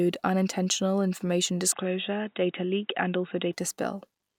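Right after "unintentional information", from 1.72 s to 3.53 s, the speech turns dull and boxy with nothing above 3.8 kHz, then clears again. It's likely an input switched to a poorer device. The switch has no gap and no obvious level jump, and adds faint background noise well below the speech.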